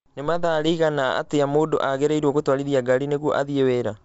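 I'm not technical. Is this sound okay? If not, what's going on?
Yes, nothing is wrong with this recording. The speech has been sent through G.722 wideband telephone coding, the kind used for HD calls, which sounds fuller than an ordinary phone line but still lacks the very highest sparkle.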